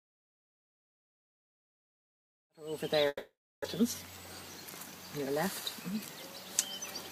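Long network dropout, 3.07 to 3.81 s: the sound smears into a fading buzz, then 0.36 s of silence, likely from lost packets, and resumes with a part missing.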